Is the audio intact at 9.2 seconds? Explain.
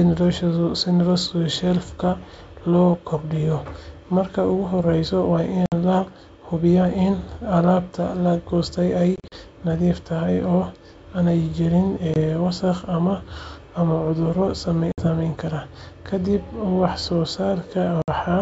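No. Between 9.16 and 9.34 s there is packet loss on an ADPCM call: about 100 ms of audio drops out in several hard-edged silent gaps spread over roughly 160 ms, the longest lasting 40 ms, consistent with about five lost packets. Because the decoder's adaptive predictor and step size lose track of the sender's during each gap, speech resumes slightly distorted before settling within tens of milliseconds.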